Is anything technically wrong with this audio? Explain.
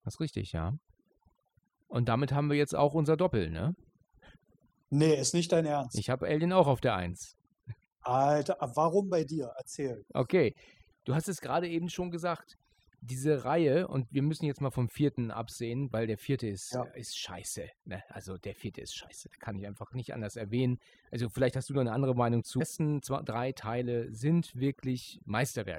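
Yes. Two faults are present.

Overdone noise removal runs through the whole clip. The noise reduction was pushed too hard, so each frequency band that falls close to its estimate of the background noise is cut deeply or shut off entirely. The weaker parts of the speech fall below that threshold and are removed along with the noise. The background drops and breaks up into twinkling, warbling specks.

At 22.6 s there is an abrupt jump forward with a small blip, as if a stretch of the audio is missing. The likely cause is a stream segment skipped: one segment of the segmented stream failed to load, and the player moved straight on to the next one. Because nothing fills the gap, the sound lurches ahead at that point instead of continuing smoothly.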